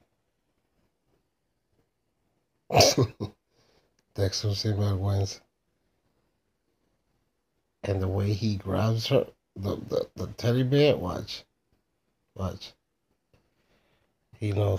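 Nothing goes wrong anywhere in this one, so there's no technical fault to point out.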